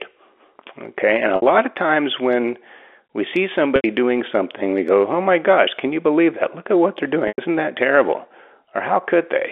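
Packet loss with pitch repetition breaks this speech clip three times: 1.36 to 1.42 s (60 ms, just before "of times when we"), 3.76 to 3.84 s (80 ms, between "times when we see" and "doing something we go"), and 7.28 to 7.38 s (100 ms, between "at what they're" and "that terrible"). Each time audio goes missing, which fits 20 ms packets, and the receiver loops the last pitch period. That gives a brief held buzz that fades toward silence before the speech cross-fades back in over the band-limited G.711 telephone sound.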